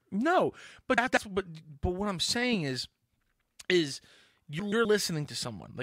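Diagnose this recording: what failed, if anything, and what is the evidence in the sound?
The failure is frames out of order, at the network or jitter-buffer stage feeding the decoder. At 0.98–1.17 s and again at 4.59–4.85 s the sound turns into a brief garbled flutter. Two adjacent blocks, about 96 ms each in the first event and about 128 ms each in the second, were delivered and decoded swapped. Unlike a dropout or a repeated packet, nothing is missing or doubled, and the timing afterwards stays intact.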